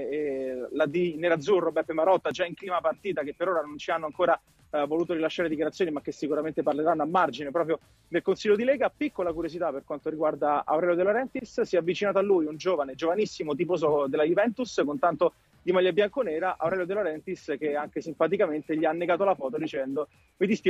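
No audible technical faults.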